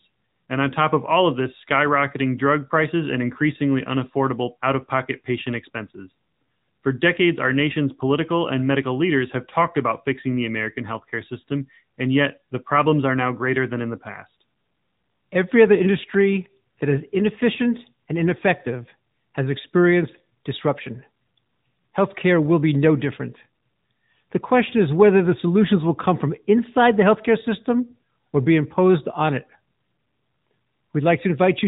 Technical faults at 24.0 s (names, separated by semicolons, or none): AMR narrowband mobile codec